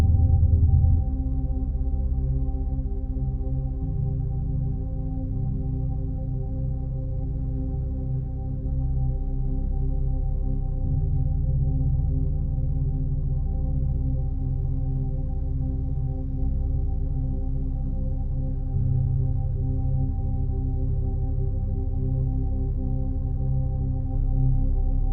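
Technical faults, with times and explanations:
throughout, stereo read as mono: the whole clip runs at half speed and a full octave (12 semitones) low, sounding slow and dark. Interleaved left and right samples were read in turn as one channel, so every stereo frame became two mono samples.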